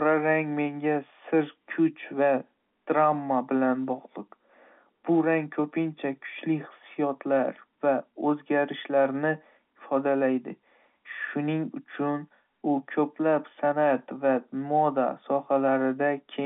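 No technical faults can be heard anywhere in the speech. It comes through G.711 telephone coding as normal, confined to the phone band of about 150 Hz to 3.4 kHz, with at most a faint trace of the coding's level-following noise.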